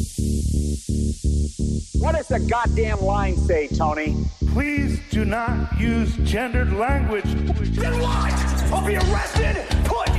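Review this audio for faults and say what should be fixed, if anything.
Two corrupt frames were decoded, at 4.67–4.69 s and 7.49–7.52 s. In each, damaged bits in a single compressed frame sent energy to the wrong frequencies, producing a short chirp or blip peaking around -15 dBFS. A spectrogram shows each as a brief patch of energy at the wrong frequencies. Adding checksums with frame concealment, so that failed frames are replaced rather than played, would prevent this.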